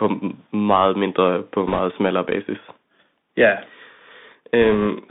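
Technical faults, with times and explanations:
Throughout: Bluetooth CVSD headset codec. The speech passes through a narrowband one-bit delta modulator, so nothing survives outside roughly 200 Hz to 3.7 kHz. Sibilants turn scratchy and a granular hiss sits underneath. On a spectrogram, everything above about 3.7 kHz is empty, with a granular noise floor below.
1.67–1.79 s: bit errors on a Bluetooth voice link, between "meget mindre på" and "smallere basis". Flipped bits in the delta stream push the waveform up or down in small wrong steps, so you hear a rushing, crackly burst rather than clicks. The error rate is around 4 percent. It shows as broadband grainy noise filling the band.
4.62–4.87 s: bit errors on a Bluetooth voice link again, lighter, with an error rate of roughly 1.5 percent. The crackle is softer. Each wrong step is small and decays quickly, so the waveform looks fuzzy rather than spiked.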